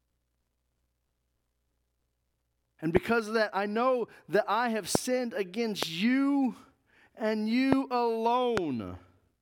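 Loud pops at 2.97–2.99 s (before "of that I know"), 4.95–4.97 s (after "know that I have"), 5.83–5.85, 7.73–7.75 and 8.57–8.60 s: each a single sharp click roughly 20 dB above the speech, which continues underneath, likely from brief voltage spikes entering the signal.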